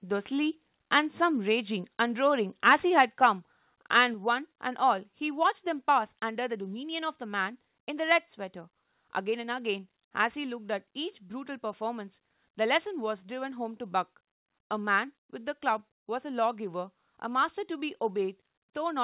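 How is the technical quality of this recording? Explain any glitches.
The recording has two short stretches of harsh clipping early on, each with a sudden drop in level, heard through a narrowband call path that passes nothing above 4 kHz.

Microphone overload, 2.66–3.26 s and 3.95–4.03 s: the peaks likely drove the converter past full scale, by about 6 dB and then about 5 dB. A few percent of samples had their tops flattened, giving the loudest syllables a crackling, gritty edge.

Microphone volume stepped down, at 3.06 s and 4.14 s: the input volume falls in one step, about 3 dB and then about 4 dB. This is likely the call software reducing the device gain to stop the clipping. The speech and the background both become audibly quieter at once.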